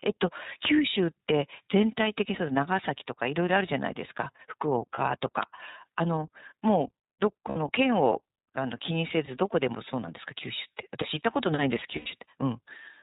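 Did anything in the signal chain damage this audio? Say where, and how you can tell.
Yes. iLBC codec damage runs throughout: the speech is capped below 4 kHz and sounds rough and synthetic, consistent with 30 ms frames at 13.33 kbps.

Lost iLBC frames occur at 4.94–4.99, 7.49–7.56 and 11.96–12.07 s. These are network packet losses that the decoder concealed with buzzy, held vowel-like tones lasting roughly 30, 60 and 90 ms, and the speech recovers almost immediately after each.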